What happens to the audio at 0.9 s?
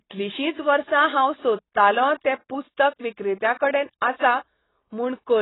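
At 0.9 s the speech carries the same damage heard across the whole clip, likely from AAC compression. Nothing reaches above about 3.9 kHz, so the sound is dull. The damage is heavy. The codec splits each frame into frequency lines and drops or coarsely quantises what it judges least audible. That leaves a warbling, fizzy smear on sibilants. The depth of loss fits a very low bitrate, around 16 kbps.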